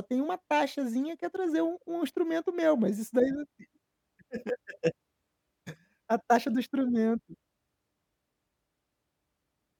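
Corrupt frame decoded at 0.74 to 0.76 s and again at 5.76 s: compressed frames arrived with flipped bits, and the decoder played them anyway, so misread gains and spectral codes placed energy at wrong frequencies for the span of the damaged data. The first is a short error peaking near -45 dBFS, consistent with a single frame. The second is fainter, around -60 dBFS, and suggests a couple of frames hit.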